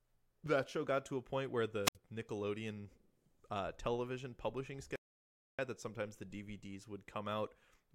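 At 1.84 s, just after "to a point where", a short burst of hiss gives way to about 67 ms of near silence before the voice returns at 1.96 s. This is a wireless microphone squelch dropout: the FM radio link faded and the receiver's squelch muted the output.

From 4.96 to 5.59 s, after "uh television publishing", the speech halts for about 630 ms, then resumes with "that sometimes the". This is likely a playback stall, where the player ran short of data or was blocked and output silence until it recovered.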